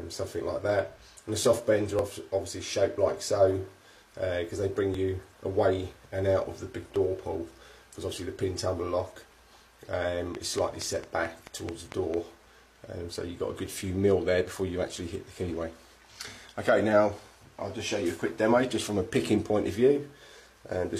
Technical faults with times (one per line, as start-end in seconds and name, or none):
0.98-1.02 overlap between stream segments
1.99-2.03 overlap between stream segments
4.94-4.99 overlap between stream segments
6.96-7.00 overlap between stream segments
10.35-12.15 train of clicks